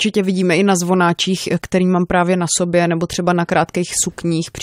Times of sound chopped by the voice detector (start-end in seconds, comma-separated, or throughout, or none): none